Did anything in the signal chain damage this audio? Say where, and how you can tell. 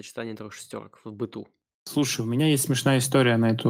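Yes. From 1.93 s, right after "трех шестерок в быту", the level climbs steadily until the clip ends at about 3.7 s, with the voice and the background noise swelling together rather than the voice alone getting louder. That joint rise points to automatic gain rising in the call-processing stage: the gain control judged the input too quiet and kept raising its gain gradually across the last 1.8 s or so.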